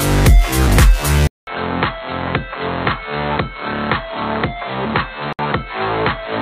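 At 1.27 s the sound goes silent for about 200 ms and comes back duller, boxier and roughly 10 dB quieter, with a new noise floor sitting roughly 35 dB below it. This is likely an input switched to a poorer device, a narrower-band microphone or headset path. On a spectrogram, everything above 4.2 kHz disappears from that point to the end, and a fresh band of noise appears. The waveform shows a clear drop in height after the short blank.

At 5.33 s a gap at a join of encoded pieces opens: the audio stops dead for about 62 ms, then resumes where it left off at 5.39 s. Two separately encoded segments were butted together without removing the encoder's start-up delay and end-of-frame padding, so that silence stays in. The waveform shows a flat stretch with edges smeared by the codec, and the spectrogram shows a thin empty vertical stripe.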